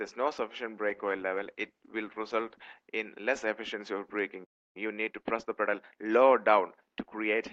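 From 0.9 to 2.95 s the audio goes through a call bitrate drop: the encoder falls from 128 kbps to 16 kbps and stays at its lowest for 1.98 s, so the sound turns coarse and muffled. On a spectrogram the top band disappears, with energy ending near 12 kHz instead of 20 kHz. At 4.44 s a playback stall cuts the sound off for about 306 ms, until 4.77 s. The waveform shows a flat gap, and the likely cause is the player running short of data or being blocked. From 4.77 to 5.99 s comes a time-compressed catch-up, where the player clears its backlog by splicing out short pieces. The audio runs at 1.25x speed at unchanged pitch. The spectrogram shows slightly crowded features and small seams at the cross-fades.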